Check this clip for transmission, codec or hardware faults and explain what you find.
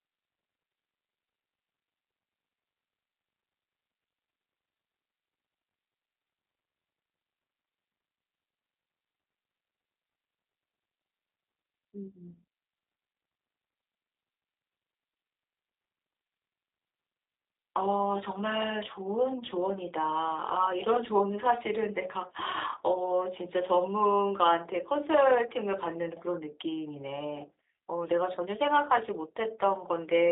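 The clip has one fault, present throughout: G.729 codec damage. The speech passed through a low-rate vocal-tract model with a few pulses per frame, plainly audible as a rough, slightly synthetic quality. The line band runs roughly 300 Hz to 3.7 kHz, with nothing above 3.8 kHz, which fits an 8 kbit/s G.729A link.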